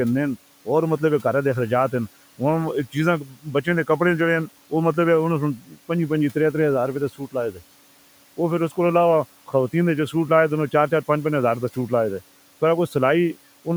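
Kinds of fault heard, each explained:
Speech cut by the noise suppressor: the suppressor mistook bits of speech for noise, pulling them down about 12 dB at 3.24–3.47 s and 5.57–5.77 s, so they sound swallowed.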